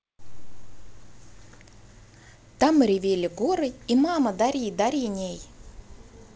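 The speech comes through G.722 wideband telephone coding at 56 kbit/s with no technical fault, its bandwidth reaching to about 7 kHz with a light hiss in the upper band and a slight added graininess in the lower band from the reduced bitrate.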